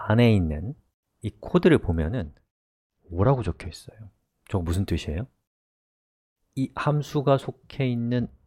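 From 2.20 to 3.74 s and again from 7.97 s to the end, there's a Bluetooth SBC bit pool drop: the treble dulls and gritty noise creeps in, which fits the bit pool falling from 28 to 11, around 90 kbps.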